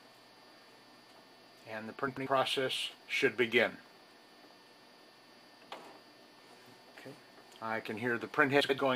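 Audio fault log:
2.07–2.27 s and 8.60–8.80 s, frames out of order: each stretch plays as a brief garbled flutter. Two adjacent blocks of about 93 ms, which fits runs of four codec frames, were decoded in swapped order, so their halves play exchanged and no time is lost.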